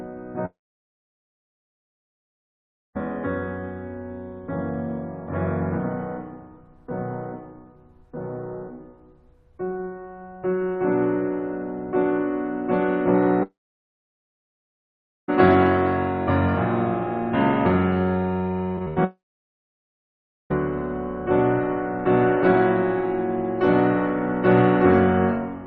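A music clip with three long network dropouts, at 0.45–2.97 s, 13.43–15.30 s and 19.04–20.52 s, where about 2.5 s, 1.86 s and 1.46 s of music go missing. The likely cause is audio that never arrived. Each time, the last sound smears into a brief fading buzz and then falls silent. On a waveform this looks like a collapse to a flat line, and on a spectrogram a short smeared tail gives way to an empty band. Just before the last dropout, 18.76–18.98 s has repeated packet loss (robotic sound): four short holes, the longest about 81 ms, each patched by stretching the previous sound. The result is choppy, with pieces missing, and the spectrogram shows striped, repeated slices.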